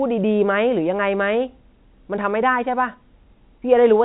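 No technical faults are present.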